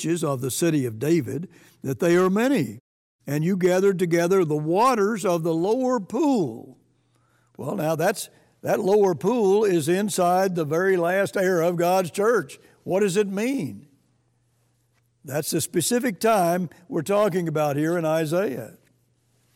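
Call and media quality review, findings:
Hard clipping throughout, entire clip. Speech level runs about 4 dB past what a converter or fixed-point stage can pass, so peaks are sheared flat. Only a small fraction of samples exceed the limit, heard as brief crackle on loud syllables, not continuous fuzz.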